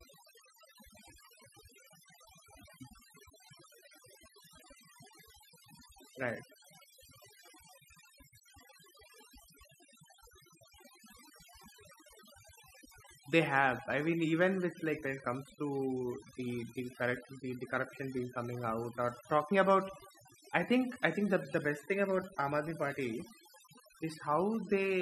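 From start to finish the speech carries overdone noise removal: an over-aggressive noise reducer switched off individual frequency bands near its noise estimate, taking quiet speech detail too. Gaps sparkle with twinkling specks, and a spectrogram shows a speckled, patchy background with holes between harmonics.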